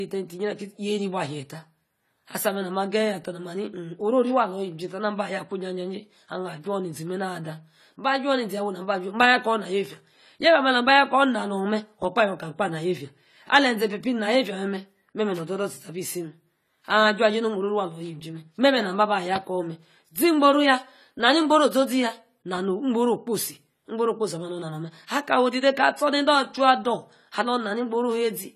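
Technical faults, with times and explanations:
Throughout, AAC compression: the speech sounds dull and smeared, with a fizzy, warbling edge on sibilants and sustained vowels, and nothing is heard above about 14.1 kHz. This is likely AAC-LC coding at a low rate, around the 32 kbps range, where the encoder quantises each block of frequency lines coarsely against a hearing model. To save bits it cuts the top of the spectrum and thins or substitutes detail in the upper bands, which leaves the plainly audible roughness.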